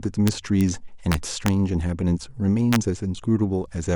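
Integer overflow hits the speech at 0.28–0.61 s, 1.12–1.48 s (driven about 2 dB past full scale) and 2.73–2.76 s: loud peaks wrap to the opposite sign instead of limiting, giving violent cracks. The waveform shows sudden full-range sign flips; the spectrogram shows bright broadband vertical streaks.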